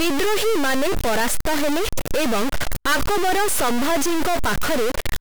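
A stuck bit runs through the whole speech clip. The likely cause is one data bit held at a fixed value, so about half the samples are offset by a step of about -15 dBFS. The result is harsh, buzzy distortion, and pauses fill with loud noise.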